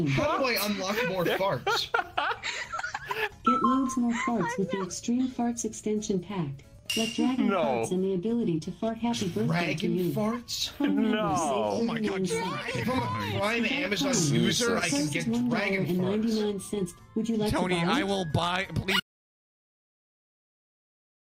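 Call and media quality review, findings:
Audio dropout to silence from 19.0 s, running to end of clip. Sound cuts out mid-flow; gap is silent, no room tone or noise floor. Waveform: flat line. Spectrogram: solid black, all bands, abrupt vertical edge at 19.0 s. Likely cause: input lost upstream (device disconnect, link failure or mute), encoder continuing to write silence. Content after 19.0 s unrecoverable.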